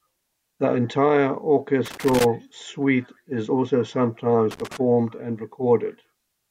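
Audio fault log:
1.86–2.25 s and 4.51–4.77 s, loose connector crackle: a worn contact intermittently breaks the signal right before and after "suite is also sometimes", leaving ragged broadband vertical streaks and spiky, chopped waveform dropouts.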